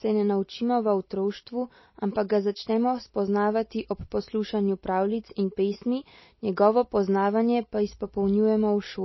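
Throughout, the speech sounds watery and dull, with nothing above 5.8 kHz. That points to heavy MP3 compression, likely at a bitrate around 24 kbps.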